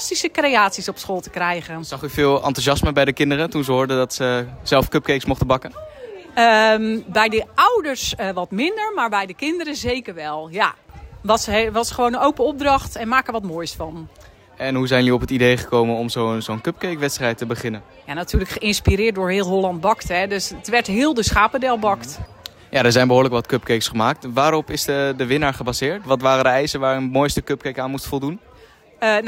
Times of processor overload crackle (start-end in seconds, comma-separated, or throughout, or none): none